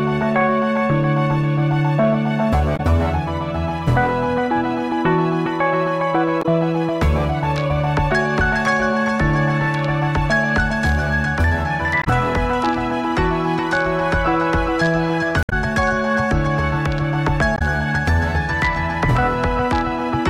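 Damaged data in a compressed stream produces five brief glitches, at 2.73–2.80, 6.39–6.46, 12.01–12.07, 15.43–15.53 and 17.55–17.62 s, where the decoder misreads frames and resynchronises. On a spectrogram each shows as a short disturbance; the waveform shows an abrupt discontinuity.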